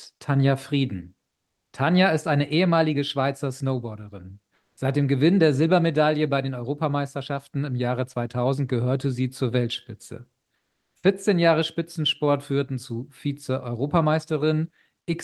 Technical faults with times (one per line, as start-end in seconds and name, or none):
1.33-1.73 comfort noise in place of the background
4.55-4.77 comfort noise in place of the background
10.55-11.03 comfort noise in place of the background